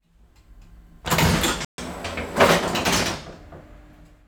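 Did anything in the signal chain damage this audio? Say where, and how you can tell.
Yes. A playback stall silences the sound from 1.65 to 1.78 s, about 134 ms, likely from a starved buffer or blocked player thread. The waveform shows a flat gap.

Catch-up at higher speed follows from 1.78 to 3.12 s. The player resamples at 1.1x to recover lost time, raising pitch by about one and a half semitones. On a spectrogram, the harmonics visibly shift upward, then drop back.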